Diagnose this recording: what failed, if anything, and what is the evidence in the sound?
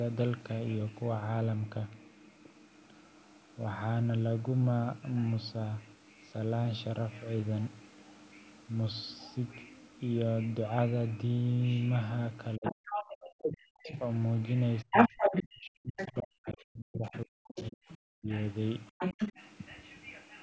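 Speech suppressed in double talk, at the call-processing stage: the speech dips by as much as about 40 dB at 12.56–13.9 s, 14.83–18.3 s and 18.93–19.39 s, each time while a second voice is present. Unlike a network dropout, the gaps track the overlap rather than falling at random, likely because the echo canceller ducked everything it couldn't separate.

Other side's voice leaking through, also in call processing: a second talker appears at 12.64–13.99 s, 14.91–15.44 s, 15.97–16.1 s, 17.15–17.97 s and 18.98–19.32 s. It ranges from about 10 dB above the speech to about 15 dB below. The overlap with the ducking sets it apart from wiring crosstalk, pointing to likely residual loudspeaker echo.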